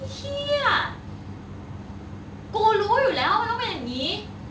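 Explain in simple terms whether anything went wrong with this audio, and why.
Nothing went wrong: the speech carries the ordinary sound of a video or phone call link, with the highest frequencies stopping at about 8 kHz as that kind of connection normally does, and no glitches, dropouts or distortion anywhere.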